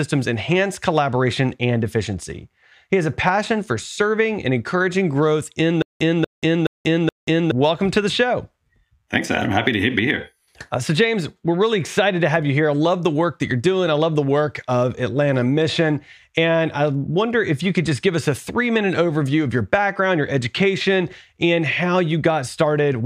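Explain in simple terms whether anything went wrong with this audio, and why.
From 5.82 to 7.51 s, a 0.24 s snippet repeats four times with silence between. This stutter with silent gaps likely comes from a stalled stream replaying its last piece.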